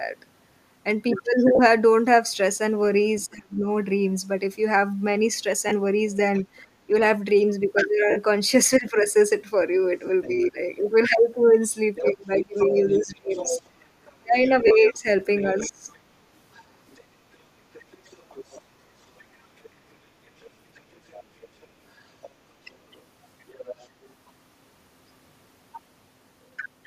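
At 1.55–1.59 s, lost LE Audio frames cut a gap of 37.5 ms, which fits five 7.5 ms LC3 frames. The decoder repeats the last spectrum with scrambled phase, so the speech briefly turns into a grainy smear.

From 3.27 to 3.67 s the voice sinks by roughly 30 dB. This is likely speech suppressed in double talk: the echo canceller, unable to separate the talker from the loudspeaker, turns everything down.

Another frame loss at 5.69–5.72 s lasts 22.5 ms, about three frames, and leaves a short noisy blur in place of the voice.

At 6.34–6.62 s a second voice, about 20 dB under the talker, is likely the other side's voice leaking through as uncancelled loudspeaker echo.

At 6.87–6.91 s the suppression returns briefly as a dip of about 10 dB.

The longest frame loss, 52.5 ms at 8.10–8.19 s, fits seven frames. The concealed spectrum starts to fade and sounds like a noisy smear.

At 8.78–9.08 s the voice ducks by about 15 dB as the double-talk suppression bites again.

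At 10.06–10.10 s, 30 ms of frames go missing and produce another brief smear.

At 10.23–10.50 s the far voice leaks through again, about 25 dB down. Over almost the same stretch, 10.27–10.58 s, the talker is pulled down by about 15 dB in short patches.

From 11.95 to 24.11 s the other side's voice comes through continuously at only about 10 dB below the talker.

Inside that stretch, from 12.02 to 15.84 s, the talker is repeatedly cut back by up to about 25 dB. The cuts come in pieces adding up to about a second, leaving the voice gapped and dulled.

At 14.67–14.71 s, a 30 ms frame loss adds a further grainy blip.

The LC3 coding itself, likely at 64 kbps with 7.5 ms frames, adds only a faint breathy grain.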